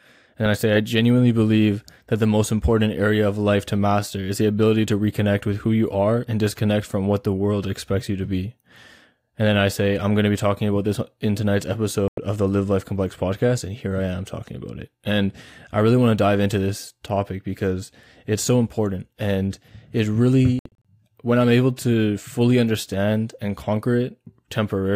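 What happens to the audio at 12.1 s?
At 12.08 s the speech drops out in a digital broadcast dropout that lasts until 12.18 s. The receiver stopped getting usable frames, either from lost signal or from frames failing their checksum, so it muted rather than play corrupt data. The hole is about 96 ms, which fits roughly three lost frames, and the sound in that stretch is gone rather than damaged. On a waveform it shows as a flat gap, and on a spectrogram as a clean vertical band of silence across every frequency.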